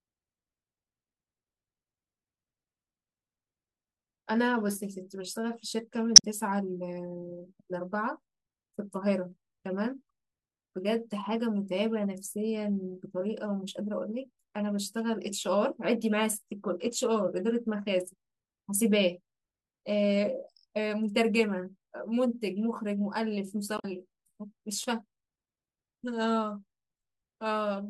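A brief glitch cuts through the speech from 6.13 to 6.24 s, and again from 23.75 to 23.85 s. Both are damaged data in the compressed stream: corrupted bytes leave the decoder misreading frames and losing sync until it finds a valid frame header. Single sharp clicks sound at 9.32 s and at 17.15 s, each a thin vertical line in the spectrum. These are likely dropped samples, with only a handful missing, so the waveform jumps abruptly to a later value without any audible gap.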